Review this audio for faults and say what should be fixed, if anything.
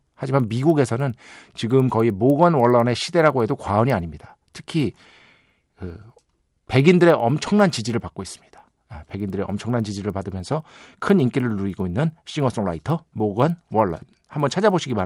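A steady ticking runs through the whole speech clip at 10 per second, present only while sound is there. This is a resampler restarted on every block: each 100 ms block was converted separately, likely doubling the rate, so every block edge carries a small error. Keeping the resampler's state running across blocks prevents it.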